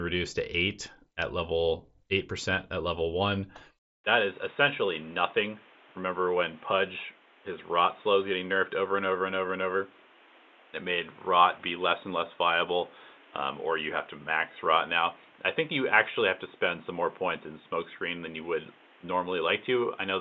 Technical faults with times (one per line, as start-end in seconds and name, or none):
4.04-20.21 input switched to a poorer device